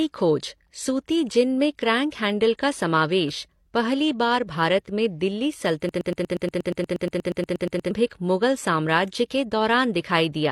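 Right from the start the speech carries transcoding between lossy codecs: nothing comes through above 13.1 kHz, and artefacts from two codecs sit on top of each other. That fits a likely chain of AAC-LC at around 48 kbit/s re-encoded to HE-AAC at around 32 kbit/s.

Then, just after "में दिल्ली", a broken-record loop runs from 5.89 to 7.91 s. A 119 ms fragment repeats exactly 17 times back to back, giving a stutter, and the speech that should fill those two seconds is gone. Likely a stalled player or stream resending its last buffer.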